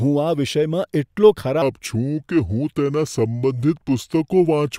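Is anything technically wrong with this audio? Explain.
Yes. From 1.62 s to the end, a section at the wrong speed plays at 0.8 times its recorded rate. Speed and pitch fall together, by roughly four semitones. The speech turns deep and slow. The likely cause is playback against the wrong clock.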